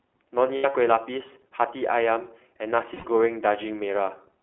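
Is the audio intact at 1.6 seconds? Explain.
No. At 1.6 seconds the speech runs through iLBC codec damage that lasts the whole clip. Each 20 ms frame is coded on its own within a 300 Hz to 3.4 kHz band, so nothing above 3.4 kHz survives, and the voice sounds thin, slightly rough and synthetic.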